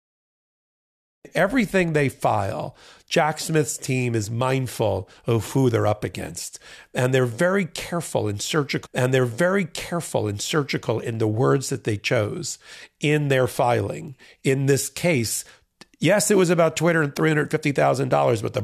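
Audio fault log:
0.00–1.25 s: cut-off start. The clip opens on digital silence, then speech enters abruptly at 1.25 s, already mid-sound. There is no natural attack or fade-in. The recording or stream began late, so the start of the utterance was lost.
8.85–10.85 s: stream segment repeated. About 2.0 s of speech plays a second time, with a small blip at the jump back. The player fetched or queued the same segment twice, so that stretch of the programme is heard again before continuing.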